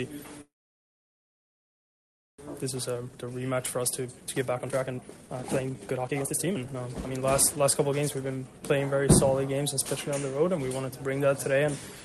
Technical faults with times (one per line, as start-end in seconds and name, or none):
0.41-2.40 call audio freeze
2.78-8.60 jitter buffer speed-up